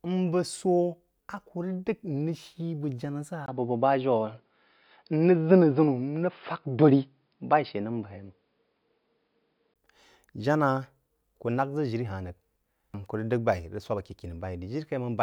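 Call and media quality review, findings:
Speech turns dull and band-limited 3.46–9.76 s, nothing above 5.1 kHz, level shifts a few dB, faint new noise floor, brief dropout at 3.46 s. Likely input switched to a poorer device, narrower capture path, reverting at 9.76 s.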